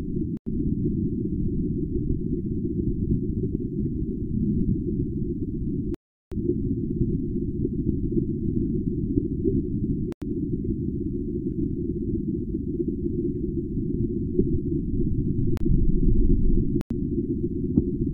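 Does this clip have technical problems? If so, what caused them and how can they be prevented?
Yes. Block of digital silence: the output buffer went unfilled, producing abrupt zeroed gaps at 0.37–0.46, 5.94–6.32 (372 ms), 10.12–10.22, 15.57–15.60 (31 ms) and 16.81–16.90 s. The 93 ms gaps fit a 4096-sample buffer at 44.1 kHz. Prevent it by giving the audio thread higher priority or larger buffers so each block is filled before its deadline.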